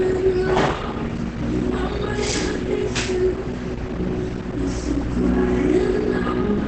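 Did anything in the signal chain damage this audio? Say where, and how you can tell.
Yes, at the codec: likely Opus compression in SILK mode, throughout. Nothing above 8.7 kHz and a muffled, hoarse texture point to about 16 kbps.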